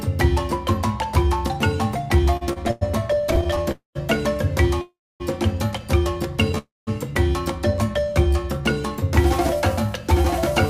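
Repeated stalls (stutter) run from 2.25 to 3.67 s. Packets arrived late and the jitter buffer kept emptying, so the receiver extended the last sound across 16 gaps, the longest 103 ms, filling 323 ms with nothing lost.

A call audio freeze follows at 3.71–3.97 s, 4.81–5.22 s and 6.58–6.89 s. Each time the sound is held and fades to silence for about 140, 260 and 190 ms, then resumes where it stopped, adding 239, 387 and 288 ms of delay. The likely cause is packets held up in transit, draining the buffer.

A jitter buffer slow-down between 7.99 and 8.63 s repeats short stretches of the signal to rebuild its reserve, adding 79 ms so the audio runs at 89% speed without changing pitch.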